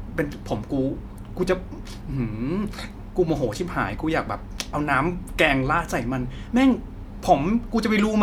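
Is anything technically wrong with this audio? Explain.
No, nothing is technically wrong with this audio.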